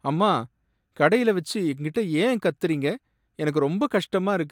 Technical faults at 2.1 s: none

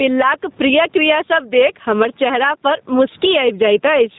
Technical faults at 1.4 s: gain pumping; G.729 codec

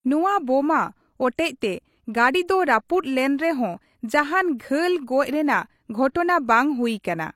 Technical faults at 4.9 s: low-bitrate audio saved at a high bitrate

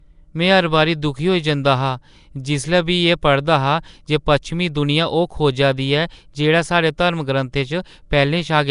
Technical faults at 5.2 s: Nellymoser compression

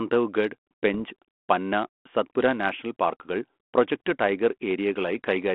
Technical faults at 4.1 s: bit errors on an ADPCM link

